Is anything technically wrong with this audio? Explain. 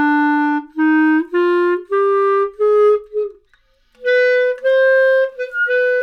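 No, nothing technically wrong can be heard here.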